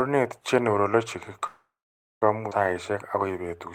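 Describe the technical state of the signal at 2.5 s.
At 2.50 s the speech skips ahead. The jump runs from 2.50 to 2.52 s. About half a second of audio is missing. That stretch was dropped, either in transit or by an overflowing jitter buffer, while later audio was already queued. Playback then jumped forward to catch up. Only about 16 ms fills the join. The two sides meet almost directly, so the speech lurches abruptly forward with a chunk cut out.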